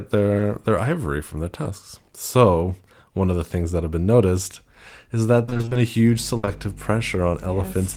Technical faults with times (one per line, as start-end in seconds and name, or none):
0.37-0.41 short concealed packet loss
1.63-1.67 short concealed packet loss
5.45-5.77 repeated packet loss (robotic sound)
6.01-7.97 mains hum
6.37-6.45 burst of packet loss
6.45-6.49 short concealed packet loss